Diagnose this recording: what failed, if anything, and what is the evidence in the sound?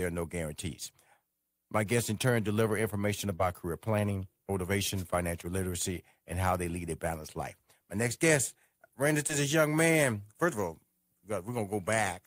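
Short concealed packet loss at the network stage, 3.35–3.41 s after "in turn deliver information" and 9.27–9.31 s before "is a young man": about 40 ms and 20 ms went missing, and the decoder bridged each gap by extending the preceding sound, leaving a brief smear.

Wireless microphone noise hit on the analogue radio link, 4.94–5.06 s, just before "literacy and how they": reflections cancelled the FM signal, and receiver noise rose into a short static burst.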